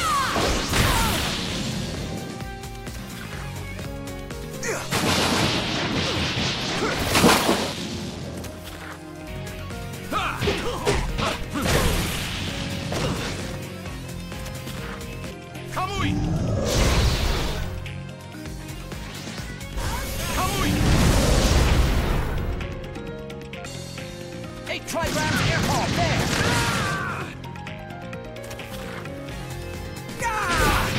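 No technical faults can be heard anywhere in this audio.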